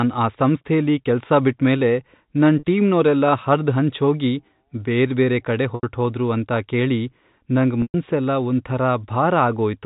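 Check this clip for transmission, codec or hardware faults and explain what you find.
Three dropouts show packet loss with pitch repetition. At 2.59 s, after "ಸಂಸ್ಥೆಲಿ ಕೆಲ್ಸ ಬಿಟ್ಮೇಲೆ ನನ್", a 40 ms gap is filled by a repeated pitch period, giving a briefly held, buzzy tone. At 5.75 s, before "ಅಂತ ಕೇಳಿ ನಂಗ್", the gap runs 80 ms. At 7.82 s the gap is 120 ms, so the repeated cycle fades toward silence before the speech cross-fades back. The repeated cycle gives a tonal hold rather than the dead silence or click of an unconcealed dropout. The telephone band of the G.711 path sits under it all.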